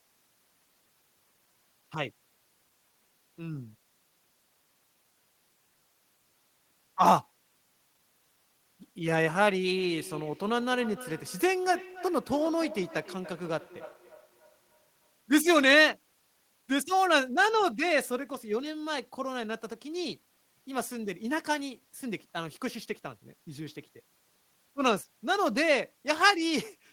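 Speech with a feedback echo between two devices from 9.78 to 15.18 s: words return at a fixed interval of roughly 300 ms, at about 18 dB below the voice. A second device plays this talker and its microphone sends it back. Unlike room reverberation, these are distinct, evenly spaced repeats.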